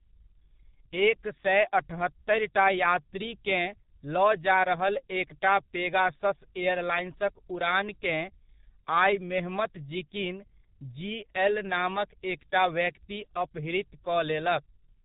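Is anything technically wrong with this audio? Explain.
Yes. Throughout, this speech carries heavy G.723.1 codec damage. Its 30 ms frames and low rate, which fits about 6.3 kbit/s, discard everything above 4 kHz, so it sounds muffled, hoarse and smeared. A spectrogram shows a hard ceiling at 4 kHz and blurred consonant onsets.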